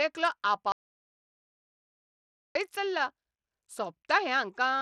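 Audio dropout to silence from 0.72 s to 2.55 s cuts this speech off for about 1.83 s. The gap is silent with no room tone, most likely because the input link failed while the recorder kept writing silence. Bluetooth SBC compression runs throughout, plainly audible as flickering, thinned-out treble and a gritty, aliased edge on the speech. That points to SBC's coarse sub-band bit allocation starving the upper bands, which fits a low bitrate of roughly 80 kbps.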